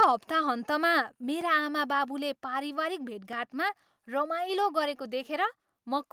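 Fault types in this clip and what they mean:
Microphone overload: Right at the start, in the first 0.05 s, the peaks have their tops sheared off, roughly one sample in twenty, which gives a harsh, crackly edge. Likely the input gain was set too high, pushing peaks about 3 dB past the converter's limit.
Repeated buffer: At 1.41 s and again at 3.33 s, a tiny 1.33 ms slice plays three times in a row with hard joins. That fits a 64-sample buffer being replayed when fresh audio arrived late, and each one comes across as a quick click or brief buzz.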